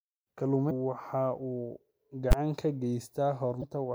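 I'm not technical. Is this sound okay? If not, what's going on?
No. There are two kinds of fault in this speech clip.

The first is damaged data in a compressed stream. It happens twice, from 0.67 to 0.71 s and from 3.59 to 3.64 s. Each lasts only a few hundredths of a second. It sounds like a short chirp or blip. Part of the stored audio file is broken at those points. The player cannot read that stretch properly. It stumbles until it finds readable data again.

The second is invalid numbers at full scale, at 2.32 s. It sounds like one sharp bang. A calculation inside the audio software went wrong and produced numbers that aren't real values. The output was pushed to the loudest possible level for about 12 ms, which fits a block of 512 samples. That stretch is too short to hear as anything but a single hit.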